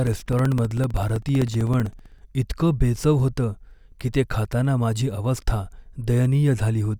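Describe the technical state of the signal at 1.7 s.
At 1.7 s the signal is inside a run of periodic USB or driver dropouts lasting from 0.07 s to about 2.19 s. Something is stalling the audio path every 64 ms, and each stall drops roughly 2 ms of audio, which is replaced by silence. Across around thirty of these brief gaps, the speech carries a steady train of ticks at about 16 per second, heard only where there is sound to interrupt.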